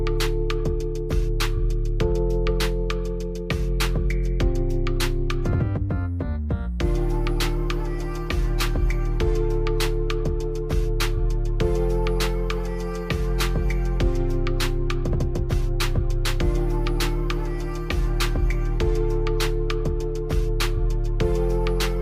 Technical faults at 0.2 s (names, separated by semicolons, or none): none